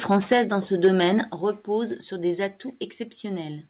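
A short speech clip with its loudest passages distorted at 0.11 to 0.40 s and again at 0.84 to 1.08 s. This harsh, crackling edge is likely microphone overload: the input was driven past the converter's ceiling, about 8 dB too hot in the first passage and about 2 dB in the second, so the peak tops are sheared off. On a waveform those stretches show flat-topped plateaus, roughly a twentieth of the samples in the first burst and a smaller share in the second. A spectrogram shows smeared vertical streaks of added harmonics above the voice partials. The level also drops abruptly twice, at 0.33 s by about 4 dB and at 1.32 s by about 7 dB, with voice and background falling together. That points to the microphone volume being stepped down by the call software reacting to the distortion. The first drop lands inside the first overload. On a waveform the envelope shrinks in a single vertical step, and on a spectrogram every band dims at the same instant rather than fading. 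The sound also carries nothing above 4 kHz, a hard ceiling across the whole spectrogram that fits a narrowband call path such as G.711 at 64 kbps.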